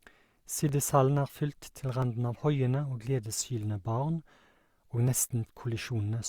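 At 0.69 s and again at 2.02 s the speech carries a single sharp click, each a thin vertical line across the spectrum. Both are most likely dropped samples: well under a millisecond of the stream goes missing, so the waveform steps abruptly from one value to a later one. Far too little is lost to remove any audible sound; the discontinuity itself is what produces each click.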